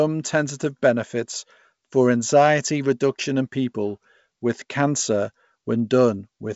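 Speech clip; no technical faults can be heard.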